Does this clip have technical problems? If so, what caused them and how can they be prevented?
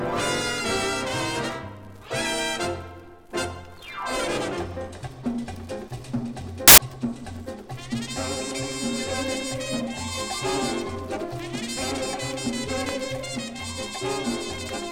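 Yes: from 6.68 to 6.78 s there's a burst of loud, harsh broadband noise, samples built from the wrong bytes, where misaligned or swapped bytes make the fast-changing low bits the large part of each value. To prevent it, make sure the reader stays aligned to sample boundaries and uses the correct byte order.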